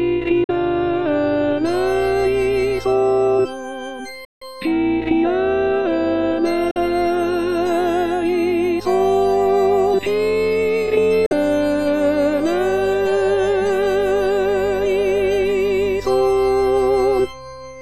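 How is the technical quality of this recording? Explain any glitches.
The recording has four short silent gaps, at 0.44 to 0.51 s, 4.25 to 4.43 s, 6.71 to 6.77 s and 11.26 to 11.33 s. The sound cuts out abruptly and comes back as if it had kept playing underneath. Three gaps each lose about 46 ms of audio and the one near 4.3 s about 162 ms. These are most likely Bluetooth dropouts, where wireless packets arrived too late and were discarded, so the output fell silent until good data resumed.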